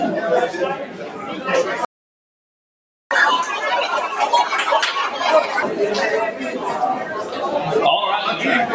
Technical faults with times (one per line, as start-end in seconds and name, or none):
0.00-8.74 noise suppressor applied to music or sounds
0.79-1.43 sound cut by the noise suppressor
1.85-3.11 playback stall
3.11-5.63 catch-up at higher speed